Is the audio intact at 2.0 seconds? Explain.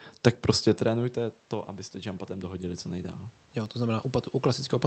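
No. At 2.0 s the clip is inside an automatic gain rising event running from 0.79 to 2.94 s, just after "tak prostě". The talker moving back around 0.5 s dropped the level reaching the microphone by about 15 dB, and the gain control responded by slowly adding about 6 dB. The voice and the room noise behind it therefore swell together over roughly two seconds rather than holding a steady level.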